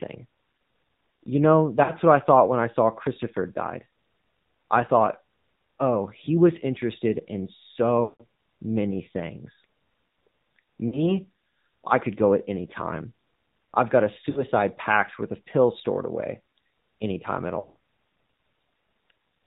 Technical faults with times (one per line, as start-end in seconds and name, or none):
0.00-19.46 AMR narrowband mobile codec
1.84-1.93 lost AMR speech frames
8.04-8.24 lost AMR speech frames
10.88-11.09 lost AMR speech frames
14.30-14.44 lost AMR speech frames
17.60-17.77 lost AMR speech frames